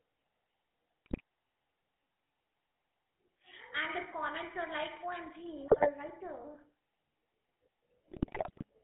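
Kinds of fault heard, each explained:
GSM full-rate codec: a pulse-excited vocal-tract model runs throughout, giving gravelly, buzzy speech limited to 250 Hz to 3.4 kHz, which fits 13 kbps GSM.
GSM bit errors: corrupted filter, pitch and gain parameters distort the speech frame after frame, causing squawking, gargled bursts at 1.06–1.21 s, 5.68–5.90 s and 8.08–8.64 s.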